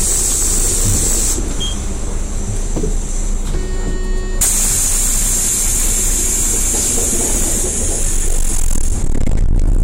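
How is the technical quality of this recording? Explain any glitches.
The recording is heavily overloaded from start to finish, and hard clipping is the dominant fault. The everyday sounds here are driven roughly 17 dB beyond what the signal path can pass, so every peak is sliced flat at the ceiling, and around one sample in seven sits pinned there. Those squared-off tops generate strong high harmonics that the original sounds never contained, so each loud moment turns into a harsh, gritty fuzz rather than occasional crackle.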